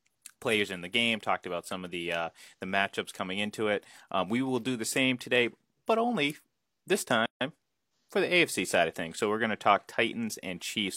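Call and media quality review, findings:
Gap at encoded-piece join, 7.26–7.41 s: 150 ms silence in speech, which resumes where it stopped with nothing missing, unlike a dropout. Untrimmed encoder delay/padding at segment join.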